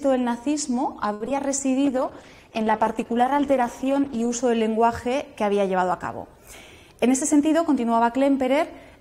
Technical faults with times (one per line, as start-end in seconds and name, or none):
1.13-1.39 repeated packet loss (robotic sound)
1.86-4.42 call bitrate drop
6.89-7.74 jitter buffer speed-up